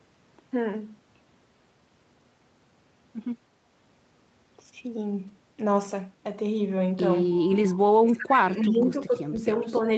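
At 5.27 s and again at 7.03 s, a single 20 ms packet was lost and rebuilt from the next packet's error-correction copy. There is no gap, but each rebuilt frame plays from a lower-bitrate copy, so it sounds briefly rougher and noisier than the surrounding speech.

From 7.3 to 7.77 s, 8.62 to 8.77 s and 9.75 to 9.81 s, a faint delayed copy of the speech appears, trailing by about 0.31 s. This is an echo leak, likely from a loudspeaker on the far end whose echo canceller let residue back. The copy sits roughly 25 dB below the speech, rising to about 15 dB below in the last scrap.

Between 7.81 and 9.11 s, the speech is suppressed in double talk, with about a second in total affected and drops of up to roughly 30 dB. A shallower dip of around 5 dB follows from 9.64 to 9.86 s. The likely cause is the echo canceller mistaking overlapping talk for echo and pulling the level down.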